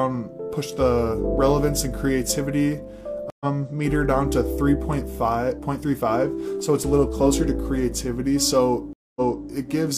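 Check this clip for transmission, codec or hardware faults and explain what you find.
Two stream reconnects break the audio. At 3.30 to 3.46 s it goes silent for 103 ms and resumes slightly further on. At 8.93 to 9.48 s a 229 ms silence is followed by a replay from 325 ms earlier, a server burst. Each time the connection dropped and a fresh decoder restarted mid-stream. Unlike a plain dropout, the timeline jumps, with skipped or repeated material.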